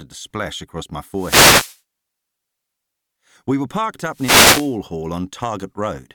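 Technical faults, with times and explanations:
1.13–1.80 s and 4.11–4.77 s, wireless microphone noise hit: just after "to splash across my" and "were parked", reflections cancel the radio signal, so receiver hiss surges into a swish of static.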